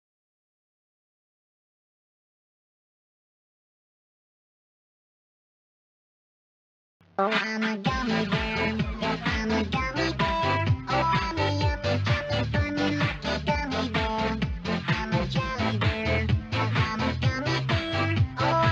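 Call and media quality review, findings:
No audible faults found in this recording.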